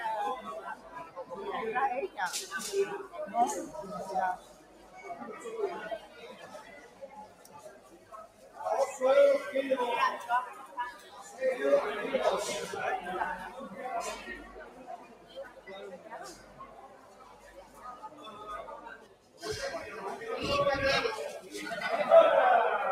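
A noise suppressor applied to music or sounds runs through the whole clip. It was built for speech. It treats steady tones, ambience and tails as noise. Its gain swings by roughly 20 dB, so the level pumps and the sound thins out.

Sound cut by the noise suppressor occurs at 0.75–1.32 s, 4.37–5.04 s, 5.99–8.59 s, 10.94–11.33 s and 14.39–19.42 s. Held or fading sound sinks by up to about 10 dB, about 7 dB at 11 s. Decays are cut short. The longest dip lasts about five seconds.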